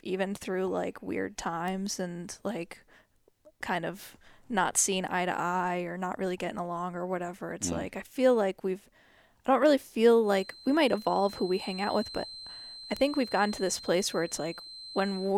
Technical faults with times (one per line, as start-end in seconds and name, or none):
1.68 bit error spike
10.19-15.38 feedback whistle
12.97 bit error spike